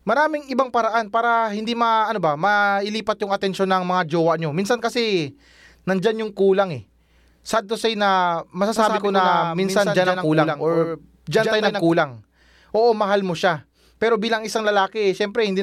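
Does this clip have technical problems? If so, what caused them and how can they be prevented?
Yes. From 8.76 to 11.92 s the speech is a doubled audio track, likely because the same signal reached the mix twice, once directly and once through a slower capture path. The second copy trails the first by about a tenth of a second and sits roughly 5 dB lower, full-band and dry with no room decay, so each syllable gets a hard slapback echo that switches on and off abruptly at those two points. To prevent this, route each source through a single capture path and monitor inputs so duplicate feeds are muted before recording.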